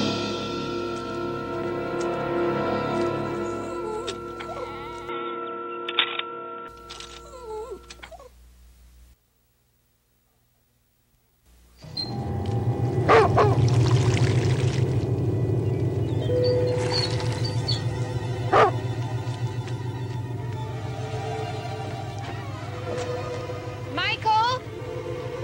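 From 5.09 to 6.68 s the sound turns dull and boxy, with nothing above 3.8 kHz, likely an input switched to a poorer device. Unlike a plain filter, a new background noise arrives with it, roughly 35 dB down, and the level shifts by about 5 dB.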